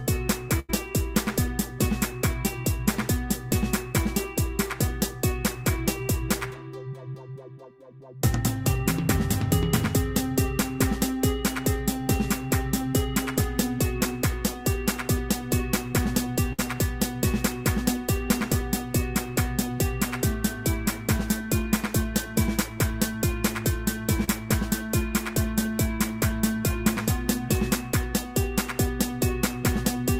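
At 0.59 to 0.71 s, a burst of packet loss cuts in. The receiver stretches the last sound for about 90 ms, fading as it goes. About 80 ms of audio is skipped when playback resumes. A shorter burst follows at 16.53 to 16.60 s, with about 60 ms lost.

At 24.24 to 24.29 s, a short concealed packet loss occurs. About 40 ms arrived too late. The decoder patches it with roughly 30 ms extrapolated from the preceding sound, then blends back. The result is a brief smear.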